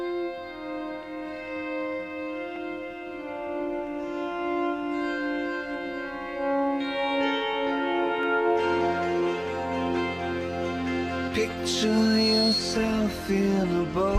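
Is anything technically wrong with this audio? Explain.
Yes. There is a loudspeaker feedback squeal from 11.80 to 12.65 s. A microphone is picking up the loudspeaker it feeds. At one frequency the loop gain rises above one, so that tone keeps feeding itself. Here the tone sits at 4.3 kHz. It swells over roughly half a second into a piercing squeal. It ends up about 5 dB louder than the rest of the sound before it stops at 12.65 s.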